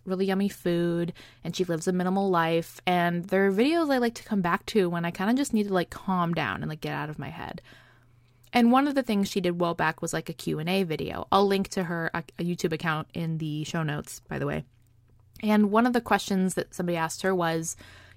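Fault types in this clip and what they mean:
No technical faults are audible anywhere in the speech; nothing to log.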